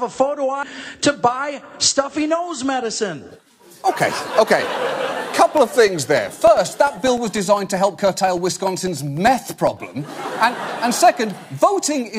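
A brief glitch at 0.63 s comes from damaged data in a compressed stream: corrupted bytes made the decoder misread those frames, lose sync and skip ahead to the next valid frame header.

From 5.47 s to 9.77 s, a regular ticking runs at a steady 0.1 s spacing, about forty ticks in all. These are periodic USB or driver dropouts: at each interval, roughly a millisecond of audio goes missing and is replaced by silence.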